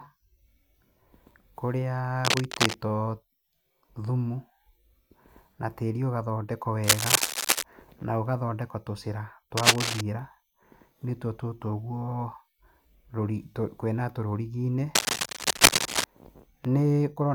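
A worn cable or connector being moved likely causes cable scratch noise: crackly rustling bursts at 2.24–2.74 s, roughly as loud as the speech, then louder at 6.83–7.64 s (between "na tĩri ũgathondekwo" and "na gũgathondekwo tũcĩra"), 9.57–10.01 s, and 14.95–16.04 s after "kwĩna rũriginĩ".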